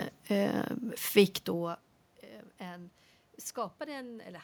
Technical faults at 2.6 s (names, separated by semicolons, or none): none